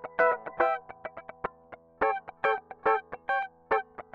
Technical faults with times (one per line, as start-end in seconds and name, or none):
none